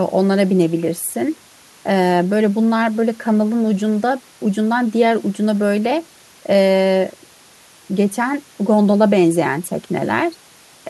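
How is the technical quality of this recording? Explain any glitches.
Listening closely, nothing stood out as a glitch or technical problem anywhere in the recording.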